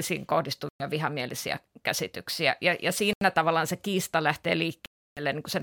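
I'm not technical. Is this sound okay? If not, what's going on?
No. The speech drops out three times. At 0.69 to 0.85 s it goes silent for about a tenth of a second just before "vihamielisiä väärinkäsityksiä". At 3.13 to 3.23 s there is a shorter gap before "tavallaan se kiista". At 4.86 to 5.22 s it stops for about a third of a second. Each time, the sound then picks up again. This is likely a Bluetooth stall, where wireless interference delays the audio so the headphones run out and pause until it arrives.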